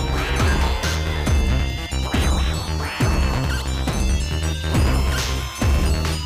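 Nothing stood out as a technical problem on listening.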